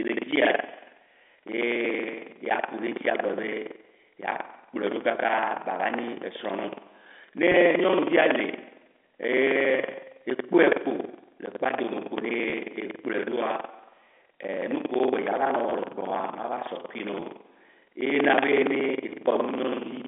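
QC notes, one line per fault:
Throughout, buffer tearing: the writer filling the ring buffer and the hardware reading it have drifted so their positions cross inside every period. Around a fifth of each buffer still holds speech from roughly a tenth of a second earlier, butted against current audio with hard joins either side. Those joins repeat at 21.5 Hz, which fits a 2048-sample buffer, giving a steady robotic rattle that rides on the speech and drops away in pauses.
7.52–7.54 s, 12.50–12.52 s, 15.70–15.72 s, 17.20–17.22 s, packet loss with pitch repetition: at each point a single packet went missing, a 20 ms gap, and the receiver filled it by looping the last pitch period of the speech. Because each loss is so short, the concealment never reaches its fade to silence. The sound is a brief held, buzzy stall in the voice before normal speech resumes, and it recurs four times.
12.18–12.21 s, 18.11–18.14 s, loud pop: a sudden pulse of voltage lands on top of the signal, likely from a switch, static discharge or a driver glitch. 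Each is a single sharp pop, about 15 dB above the speech at 12.18 s and about 20 dB above it at 18.11 s, just before "na be". The speech carries on beneath both, heard through the narrow 250 Hz to 3.5 kHz band of the G.711 A-law line.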